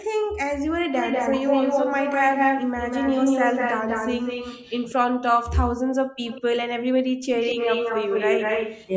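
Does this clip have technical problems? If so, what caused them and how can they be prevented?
Yes. The room background drops away sharply, by about 40 dB, at 0.0–0.45 s, 5.18–5.38 s, 5.81–5.93 s and 6.68–7.27 s, each dip lasting only a fraction of a second before the ambience returns. This is background gated by the echo canceller. While the far end's audio was playing through the loudspeaker, the canceller clamped the microphone hard, taking the room sound down with it. Using a headset, or setting the canceller to suppress less aggressively and fill gaps with comfort noise, would prevent these dropouts.

A second, delayed copy of the speech trails the original by 193 ms from 0.96 to 4.93 s and again from 7.34 to 8.87 s, at roughly the same loudness as the speech itself. A fainter burst appears at 6.27–6.42 s. This is an echo leak, likely caused by a loudspeaker on one end whose echo canceller failed to remove what its microphone picked up and sent it back. 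Headphones or a lower loudspeaker volume on that end would prevent it.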